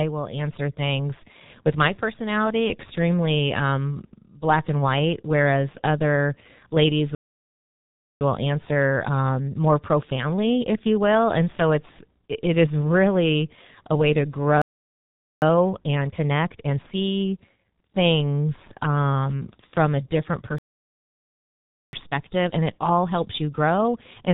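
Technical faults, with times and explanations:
Throughout: G.723.1 codec. The sound is muffled and hoarse, with smeared consonants. Nothing passes above 4 kHz. Heavy damage at about 6.3 kbit/s comes from coarse 30 ms frames and a slowly updated voice model that cannot follow fast changes.
7.15 to 8.21 s, 14.62 to 15.42 s, 20.58 to 21.93 s: playback stall. The audio cuts to silence after "white whereas other ladies" for 1.06 s, after "really a way to" for 0.80 s, then for 1.35 s. The player likely ran short of data or its thread was blocked.
8.21 to 11.21 s, 15.42 to 17.02 s, 21.93 to 24.33 s: time-compressed catch-up. After each stall the sound runs hurried but at normal pitch, at 1.1, 1.5 and 1.15 times speed. Small pieces are cut and cross-faded to clear the backlog.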